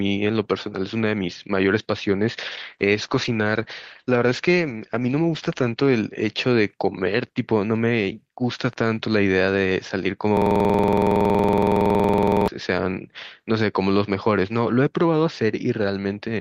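Two separate faults turn up in this speech recording. From 2.53 to 6.17 s there's a call bitrate drop: the encoder goes from 48 kbps down to 12 kbps and holds the low rate for about 3.4 s. The audible bandwidth shrinks from 20 kHz to 8 kHz, so the speech goes muffled and coarse before it recovers. Then from 10.37 to 12.48 s you get a system hang loop. The machine stalls while the audio hardware keeps replaying one 46.44 ms chunk, which fits a 2048-sample buffer, so it's a machine-gun stutter at about 21.5 Hz.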